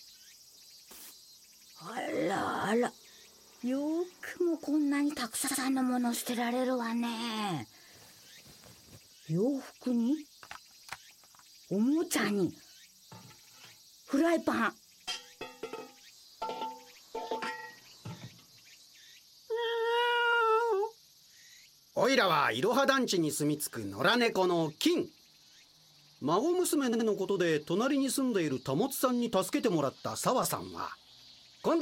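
Repeated frames at 2.02, 5.46, 17.58, 20.32, 26.92 and 30.43 s replay short compressed blocks two or three times. Each is a brief stutter. Unlike a dropout, nothing is lost: the same slice recurs and the audio runs longer.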